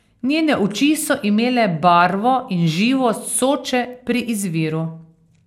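From start to finish the speech carries a swirly, hollow smear, and consonant attacks sound blurred. The likely cause is generation loss: the character fits audio passed through an MP2 encoder at 128 kbit/s around ten times, each pass requantising on a shifted frame grid so noise and gaps accumulate. A spectrogram shows nothing above 16.7 kHz and ragged, patchy holes in the upper bands, while waveform transients look softened.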